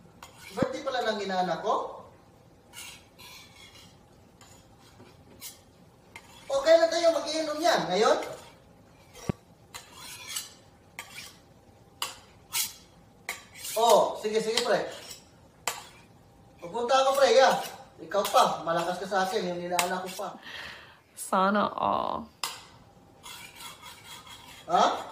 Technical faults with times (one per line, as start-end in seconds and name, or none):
0.62-0.65 loud pop
9.29-9.32 loud pop